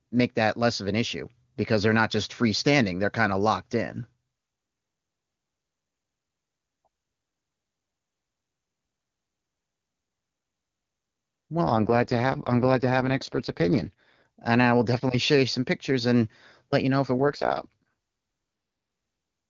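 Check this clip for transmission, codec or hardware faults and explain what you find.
Two AMR rate drops affect this speech, from 11.64 to 14.26 s and from 17.19 to 17.83 s. Each time the radio link apparently weakened and the network switched the AMR-WB encoder from its top mode to its lowest, a change that fits a fall from 23.85 to 6.6 kbit/s, with the saved bits going to error protection. Bandwidth holds and nothing drops out, but the voice turns raspy and synthetic until the rate returns. Outside those spans the HD Voice coding shows faint or no damage.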